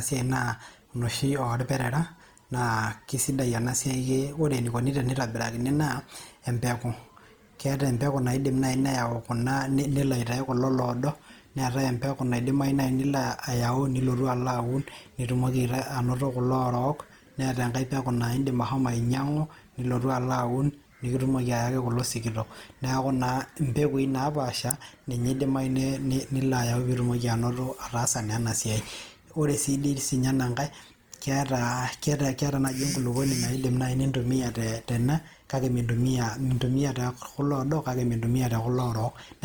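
Throughout, the speech sounds grainy and rough rather than swirly like MP3, likely Opus compression around 24 kbps filling starved bands with noise up to 20.2 kHz.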